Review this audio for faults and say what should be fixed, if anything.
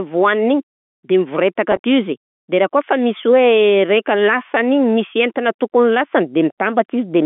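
Packet loss with pitch repetition occurs at 1.72 to 1.79 s, just after "de mivoretaka". About 70 ms is lost in pieces across 120 ms, with the longest gap 40 ms. The receiver loops the last pitch period, which sounds like a brief buzzy hold. On a spectrogram the harmonics freeze into flat, evenly spaced lines, and the waveform shows one identical cycle repeating. A larger jitter buffer with forward error correction on the link would prevent this.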